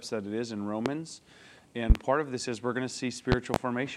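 Loud pops strike at 0.86–0.90 s, then as double pops at 1.90–1.99 s and 3.32–3.58 s, each far louder than the audio. These are likely voltage spikes from a plug, switch or static discharge. Unlike dropout clicks, the sound continues unbroken beneath them.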